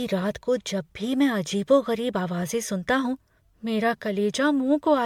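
Generation loss runs through the whole speech clip, from start to finish. The sound is swirly, smeared and hollow, attacks are blurred, and nothing is present above 19.9 kHz. The cause is most likely repeated lossy coding. The audio appears to have been encoded about five times, which fits MP3 at around 96 kbit/s. Each pass quantises on a shifted frame grid, so noise and spectral gaps pile up beyond what one encode would leave.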